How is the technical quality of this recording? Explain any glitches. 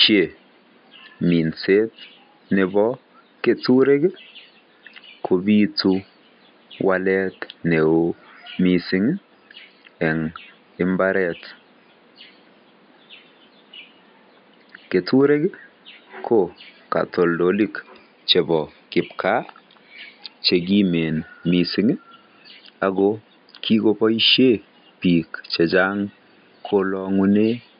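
No technical faults are audible; the only background is the room's own noise, sitting about 37 dB below the speech.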